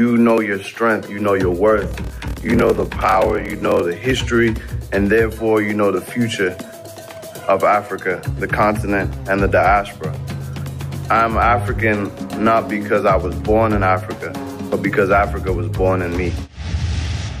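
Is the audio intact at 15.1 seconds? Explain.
Yes, at 15.1 seconds the audio plays through cleanly, with no dropout, click, distortion or other break in the signal.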